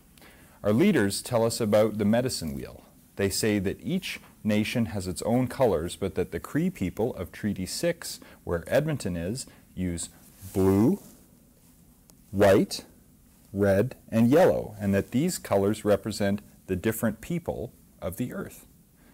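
No technical fault can be heard anywhere in this audio, and the signal stays steady and intact throughout.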